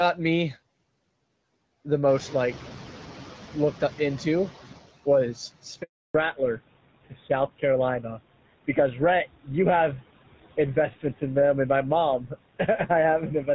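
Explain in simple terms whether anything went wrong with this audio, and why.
Several things went wrong, all typical of a phone call passing through network processing.

Noise suppressor artifacts run through the whole clip. The call's noise reduction keeps pushing the background noise down in the pauses and letting it back up under the speech.

From 2.08 s to 4.8 s you can hear the noise suppressor catching up. The room noise jumps up at around 2 s, and the suppressor is slow to react. For about 2.7 seconds the louder noise comes through only partly reduced, then it gradually sinks back.

A handover gap follows from 5.82 s to 6.14 s. The phone switched the call between networks, and for about a third of a second no speech got through. The sound fades quickly into silence, and whatever was said in that moment is lost.

Right after the handover, at 6.14 s, there is a fallback to narrowband that lasts to the end. 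The call dropped from HD Voice to an older, lower-quality phone codec, so nothing above 4 kHz remains. The voice turns duller, muffled and rougher from that point on.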